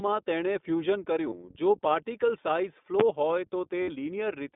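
iLBC codec damage runs through the whole speech clip. The audio is held to a narrow 200 Hz to 3.6 kHz line band and sounds clearly rough and synthetic, which fits iLBC's 15.2 kbps mode coding each 20 ms frame independently. Lost iLBC frames occur at 1.30 s for 20 ms and from 3.82 to 3.90 s for 60 ms. In each gap the decoder fills the hole by repeating the last pitch cycle mixed with noise, heard as a brief buzzy, held vowel, fading across the longer loss before clean decoding resumes almost at once. Invalid numbers at full scale strike at 3.00 s. A calculation produced infinite or invalid values that were clamped to maximum level for a block of about 11 ms, which fits a 512-sample block, so this short stretch is heard as a single very loud bang.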